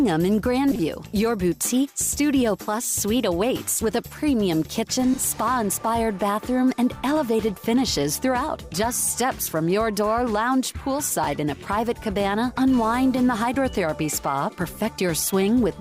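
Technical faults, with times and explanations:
0.71–0.80 s, 5.14–5.18 s and 8.99–9.04 s, frames out of order: in each spot two adjacent blocks of audio play swapped, 40 ms blocks in the first and 20 ms blocks in the other two, which fits runs of two frames and then single frames. The stretch comes out as a brief garbled flutter. Unlike a dropout or a repeated frame, nothing goes missing or plays twice, and the timing stays intact.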